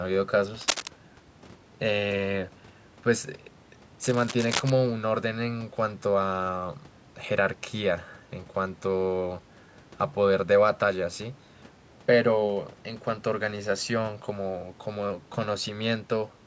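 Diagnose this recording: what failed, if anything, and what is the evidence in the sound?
Cable scratch noise in the analogue wiring: dense, irregular crackle overlays the speech from 0.59 to 0.88 s at roughly speech level, and from 4.04 to 4.70 s somewhat quieter. The likely cause is a worn cable or connector being moved, its contact resistance fluctuating rapidly.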